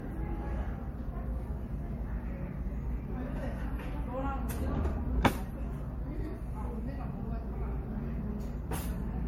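Generation loss runs throughout: swirly, smeared, hollow texture, nothing above 16.5 kHz, and blurred attacks, likely from about four MP3 passes at roughly 64 kbit/s.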